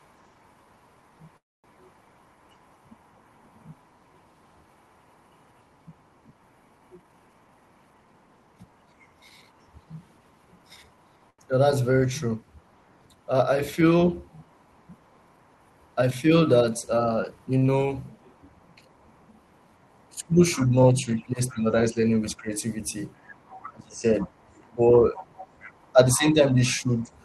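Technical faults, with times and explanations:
0.19–8.82 s, 11.06–12.82 s, 14.52–15.76 s, 18.94–21.61 s and 23.14–27.24 s, other side's voice leaking through: the echo canceller likely failed to fully remove the far-end audio that the talker's loudspeaker fed back into the microphone. A second voice therefore sits under the main one. In the first three stretches it is barely audible, far beneath the speech. From 18.94 s it rises to about 25 dB below, and from 23.14 s to about 20 dB below.
1.37–1.76 s, call audio freeze: packets were likely held up in transit, and the jitter buffer ran dry. The receiver briefly carried the last sound forward and then fell to silence for about a quarter of a second, adding 264 ms of delay in total. When the packets arrived, playback resumed from where it stopped. The result is an audible hole with nothing actually lost.
6.96–8.06 s, 16.86–17.40 s and 26.29–26.88 s, jitter buffer speed-up: the buffer held more audio than its target. 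To shed the excess, the receiver cut out short pitch-period slices in quick succession. The audio runs fast at unchanged pitch, which sounds rushed. The first stretch plays at 124% speed and drops about a third of a second. The second plays at 114% and drops roughly 70 ms. The third plays at 107% and drops around 50 ms.
11.30–11.40 s, short stall from a late packet: one packet was not there when it was due, so the receiver stretched the current sound for 84 ms until the packet arrived. Playback then continued from the same point. Nothing is missing, but one sound is held unnaturally long, with a slight buzzy sustain.
17.66–17.70 s, short concealed packet loss: 20 ms of audio never reached the decoder. The receiver filled the gap by extending the preceding sound and then blended back into the real signal. This leaves a brief smear or wobble where a tiny piece of the sound has gone.
20.12–27.10 s, speech suppressed in double talk: with both sides active at once, the echo canceller likely could not separate the local talker from the loudspeaker echo, so it attenuated both. 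The main speech dips and thins in pieces, about 2 s in total, by as much as roughly 15 dB at its deepest, while the leaking far-end voice continues underneath.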